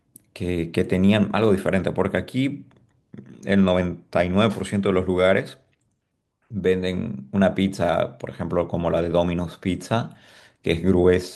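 No dropouts, clicks, distortion or other technical faults can be heard anywhere in this speech recording.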